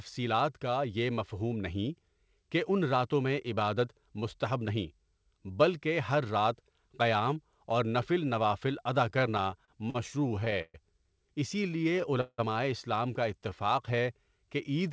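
Right after "نفل نوافل ادا", from 9.10 to 10.76 s, there are repeated stalls (stutter): fifteen little gaps, the longest 123 ms, where late packets let the buffer run dry and the speech drags and hiccups. From 11.56 to 12.11 s a jitter buffer slow-down stretches things to 92% speed, adding 53 ms, so it sounds drawn out at the same pitch. Then 12.21 to 12.40 s brings a call audio freeze of about 174 ms, a fading buzz with 50 ms of silence before "اسلام کا", likely from packets held up in transit. Just after "اسلام کا", from 13.39 to 14.03 s, a second slow-down at 92% adds 62 ms.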